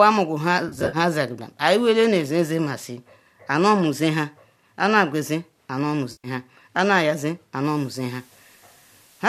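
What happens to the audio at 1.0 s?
Just before 1.0 s the speech turns smeared and phasey, with brief noisy patches, from 0.69 to 0.97 s after "mugu nha". This is AAC frame loss with concealment: about 140 ms of frames went missing across a 240 ms stretch, in runs of up to around 50 ms, and the decoder patched each gap from the last good spectrum.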